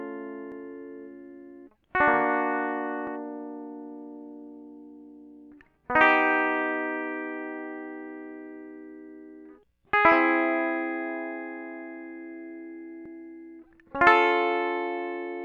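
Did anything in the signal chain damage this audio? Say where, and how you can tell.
Yes: jumps at 0.52, 3.07 and 13.06 s skip the music ahead with no gap, likely a dropped buffer (overrun) in the driver. Each shows as a waveform step and a thin vertical spectrogram line.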